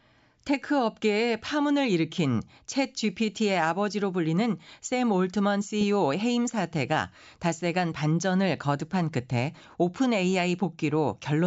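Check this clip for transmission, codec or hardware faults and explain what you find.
Nothing in the speech points to a transmission, codec or hardware fault.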